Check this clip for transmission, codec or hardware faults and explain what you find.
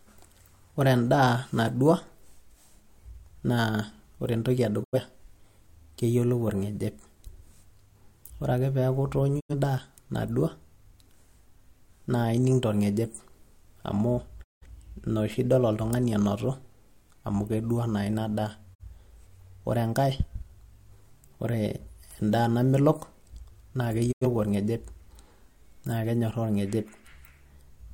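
Five digital broadcast dropouts punch holes in the speech, at 4.82, 9.39, 14.42, 18.73 and 24.11 s. Each time the receiver lost frames and muted, fading out over 20 ms. The gaps run 85 ms, but 170 ms at 14.42 and 43 ms at 18.73, which fits whole frames of about 43 ms going missing.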